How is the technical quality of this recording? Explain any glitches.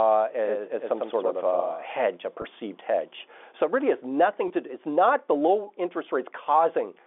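The recording is telephone-band speech, limited to roughly 250 Hz to 3.5 kHz by its G.711 coding, with three faults: a doubled audio track and two brief packet losses.

From 0.44 to 2.04 s, a doubled audio track is heard: a second full-band copy trails the original by about a tenth of a second, around 5 dB quieter. It likely comes from a second, slower capture path or a misaligned edit. Unlike an echo or reverb, the copy has no decay or room colour, and it cuts in and out abruptly.

At 2.42 to 2.44 s and again at 4.48 to 4.50 s, packet loss with pitch repetition occurs. Each time a single 20 ms packet went missing, and the receiver filled the gap by repeating the last pitch period. Each loss is heard as a brief held, buzzy note rather than a click or dropout to silence.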